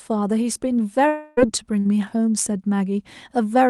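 From 1.07 to 1.39 s the sound is stretched into a fading buzz or hiss for about 0.3 s, then resumes with that stretch gone, likely a long network dropout. At 1.79 to 1.87 s a burst of packet loss removes 60 ms, concealed as a brief held buzz or hiss that decays before the audio picks up further on.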